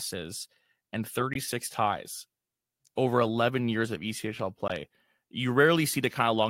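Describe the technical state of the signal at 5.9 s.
At 5.9 s the speech signal is intact, with no audible dropout, distortion, noise burst or other fault.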